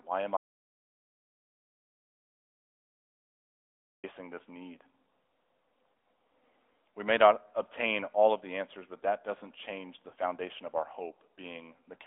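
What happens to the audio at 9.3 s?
At 9.3 s the speech carries the AMR narrowband mobile codec, a fault that runs through the whole clip rather than starting there. The sound is squeezed into a phone line band of about 300 Hz to 3.6 kHz, and because the codec rebuilds the voice from a vocal-tract model fed by sparse pulses, it has a buzzy, synthetic edge. The degree of damage fits a mid rate near 10 kbps. A simple band-limiting filter would dull the sound without adding that artificial texture.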